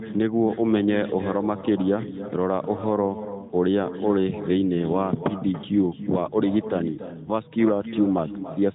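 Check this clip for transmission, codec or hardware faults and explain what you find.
One transmission fault runs through the whole recording: an echo with no canceller. The band-limited sound, with nothing above about 3.8 kHz, is consistent with the AMR narrowband mobile codec, and its light coding damage does not count as a fault.

The echo is present from start to finish. Every stretch of speech is followed roughly a third of a second later by a copy about 12 dB quieter. It sounds thinner than the original, like a shadow trailing the talker. This happens when the far end plays the call over a loudspeaker and its microphone picks that sound up again. Nothing in the path detects and subtracts that returning signal, so it travels back across the network.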